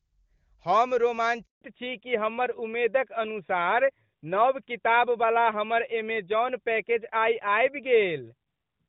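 At 1.45 s the speech just cuts out: there's a handover gap of about 160 ms, running to 1.61 s, where the call was being passed from one network to another and no speech frames made it through. The sound dies away within a few tens of milliseconds, sits in dead silence for the rest of those 160 ms, and whatever was said in that window is simply gone.

When the speech comes back at 1.61 s, it's a different call. That's a fallback to narrowband: the link dropped out of HD Voice into an older narrowband codec, which fits AMR-NB at its top 12.2 kbit/s mode. From there to the end there's nothing above 4 kHz, so the speech loses its air and crispness and sounds duller, boxier and a bit rougher. Set against the opening second and a half, where the wideband AMR-WB coding sounds clean and open, which fits its top 23.85 kbit/s rate, the change is clear.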